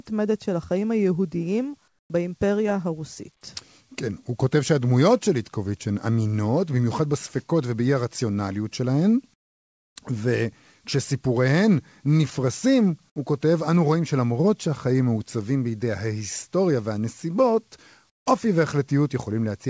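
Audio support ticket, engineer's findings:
Comfort noise in place of the background at 1.88–2.10 s, 9.34–9.96 s and 18.10–18.26 s: real room tone in pauses swapped for steady, featureless hiss about 13, 20 and 17 dB quieter. Likely discontinuous transmission with receiver-side noise fill. Not a dropout or gate, since noise continues rather than silence. The G.722-style band limit at 8 kHz stays throughout.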